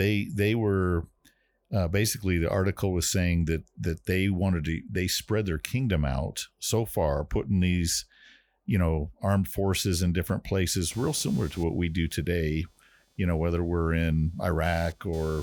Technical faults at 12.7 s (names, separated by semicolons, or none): computer activity noise